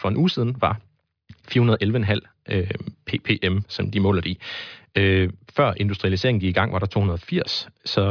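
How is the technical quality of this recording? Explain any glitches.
No glitches can be heard anywhere in the recording. There is nothing to explain.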